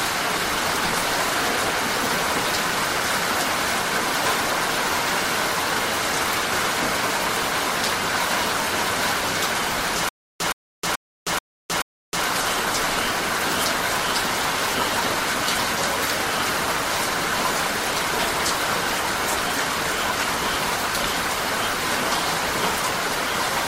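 From 10.09 to 12.25 s there is a stutter with silent gaps. A short burst of about 119 ms plays, then cuts to dead digital silence for about 314 ms. The same burst returns five times at an even pace, one every 432 ms or so. This is likely a stalled player or stream that replays its last fragment on each retry and then runs empty. Whatever audio belonged in those two seconds is missing.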